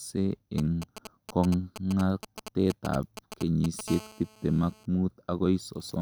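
From 0.58 s to 3.89 s, GSM signalling bursts break into the speech. A 2G phone close to the audio circuit sends short groups of radio pulses while it signals to the network. The circuit rectifies them into sound. The result is a galloping dit-dit-dit of brief buzzes at about 217 Hz. The pattern sits roughly 10 dB below the speech. It starts and stops in clusters rather than holding steady.

At 3.89 s the pattern turns into a continuous GSM phone buzz, which lasts until 4.86 s. The phone is now transmitting as in a call, bursting 216.7 times a second without a break. Rectified in the circuit, this becomes a hard, raspy buzz with many harmonics above the 217 Hz base. It sits about 20 dB below the speech. It does not follow the speech at all.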